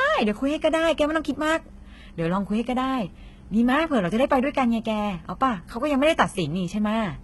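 Speech with heavy HE-AAC compression damage throughout: sibilants sound gritty and metallic, and the treble is bright but synthetic, which fits a bitrate near 16 kbps. A spectrogram would show blocky, smeared upper bands that look like copies of lower ones, with nothing above 11.8 kHz.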